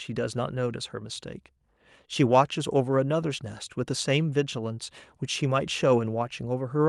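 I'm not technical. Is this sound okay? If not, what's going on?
Yes, nothing wrong is audible: this is speech carried over an ordinary internet call link, and it sounds the way a normal call should.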